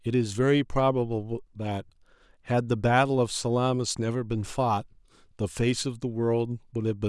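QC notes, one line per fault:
No faults found in this speech clip. Nothing in the audio calls for a note.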